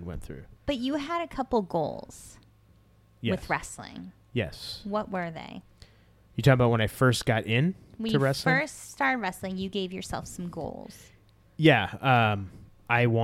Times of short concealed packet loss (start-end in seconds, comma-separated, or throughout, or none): none